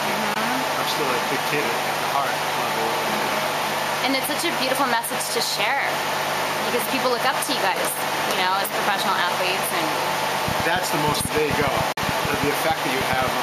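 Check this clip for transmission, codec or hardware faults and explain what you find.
Two kinds of fault are present: brief gaps consistent with Bluetooth dropouts, and a train of clicks near the end.

A Bluetooth dropout, likely, occurs at 0.34–0.36 s and again at 11.92–11.98 s. Late packets were discarded. The sound cuts out for about 15 ms and then about 44 ms, then resumes further along.

A train of clicks runs from 10.48 to 13.29 s, likely from interference. Around thirty similar pops arrive unevenly, roughly nine per second, peaking around 10 dB above the sound.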